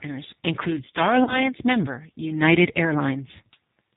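Throughout, the speech carries the sound of the G.729 codec at what fits 8 kbit/s: nothing above 4 kHz, and a slightly rough, synthetic quality that is plainly audible. This comes from each frame being rebuilt from a vocal tract filter, a pitch estimate and a few pulses.

From 1.24 s to 1.49 s there is VoIP packet loss concealed by the speech codec. About 30 ms of audio went missing, which points to a single lost packet. The decoder extended the previous pitch and filter at falling gain, giving a brief, fading stretch. Because each frame depends on the last, the speech stays weak or distorted until around 1.49 s.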